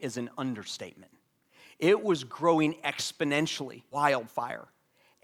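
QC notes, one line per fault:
3.91–3.96 s, stream segment skipped: the speech jumps abruptly ahead with a short blip, likely because a stream segment failed to load and playback continued with the next.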